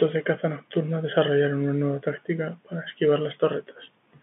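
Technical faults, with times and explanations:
Nothing here counts as a fault: the speech just has the narrow, phone-line sound of G.711 telephone coding, with everything kept between roughly 150 Hz and 3.5 kHz, exactly as that format is meant to behave.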